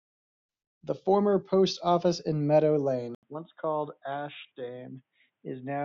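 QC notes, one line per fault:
3.15–5.85 s, input switched to a poorer device: after a silence of 80 ms the speech turns abruptly dull and boxy, with nothing above 3.8 kHz, a drop of a few dB in level, and a faint new background noise well beneath the speech. It likely comes from recording moving to a narrower-band microphone or headset profile. A low-pass filter alone would not bring the gap, the level step and the different noise floor together.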